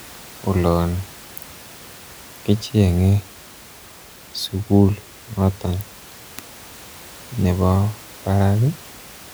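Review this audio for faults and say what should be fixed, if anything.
Nothing here needs fixing; no faults can be heard.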